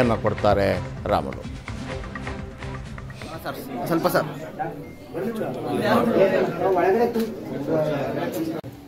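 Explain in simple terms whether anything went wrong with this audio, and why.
Nothing went wrong here.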